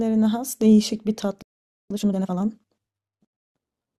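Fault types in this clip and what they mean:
Playback stall: The speech stops in mid-flow at 1.42 s and the output stays silent until 1.90 s, a gap of about 0.48 s, most likely because the player ran short of buffered data or its playback thread was held up. Unlike a brief dropout, which loses a few milliseconds, this gap is long enough to hear as a pause.
Time-compressed catch-up: Right after the stall, from 1.90 to 2.38 s, the player clears its backlog by playing the speech at twice its normal rate. It does this by cutting out small slices and cross-fading the remainder, so the speech sounds hurried while its pitch stays where it was. A simple fast replay would raise the pitch, which does not happen here. Normal pacing resumes at 2.38 s.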